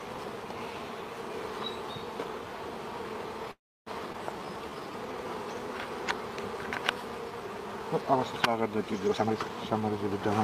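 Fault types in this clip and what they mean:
Call audio freeze: At 3.51 s the sound stops for about 0.35 s, mostly silent, then resumes where it left off. Likely packets stalled and the jitter buffer ran dry.
Skip ahead: Around 4.12 s playback jumps forward, dropping about a tenth of a second of audio, and the two sides are spliced almost directly together.
Jitter buffer slow-down: From 4.38 to 5.24 s the buffer stretches things by repeating tiny pitch-period chunks, adding 118 ms, so it runs at 87% speed, same pitch.
Jitter buffer speed-up: From 9.07 to 10.41 s it trims short pitch-period slices to shed roughly 0.3 s of backlog, so audio plays at 123% speed and sounds hurried.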